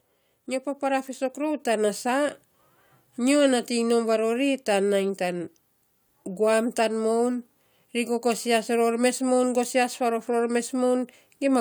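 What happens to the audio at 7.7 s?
Nothing goes wrong at 7.7 s; the audio runs through that moment intact, with no dropout, click or other fault.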